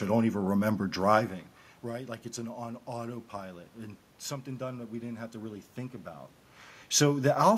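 Nothing's technically wrong with this speech recording; what you hear is just the room's own background noise and the talker shifting relative to the microphone, once around a second in and again near the end.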